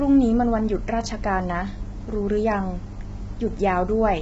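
A short speech recording shows heavy low-delay AAC compression throughout, with the voice rough and grainy and noise filling the gaps between pitch harmonics. Nothing is present above about 7.7 kHz, so the top band is cut away. The likely cause is an AAC-ELD encoder at a low rate, which fits a bitrate around 16 kbps: its short frames resolve harmonics poorly and leave too few bits for clean detail.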